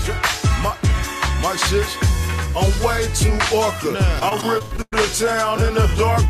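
From about 4.19 s to 4.96 s there's a burst of repeated packet loss. Packets keep going missing or arriving late, and each hole gets patched by stretching out the last bit of audio, so it turns choppy. The concealment covers roughly a third of that stretch, but some pieces just drop out, the longest about 0.1 s.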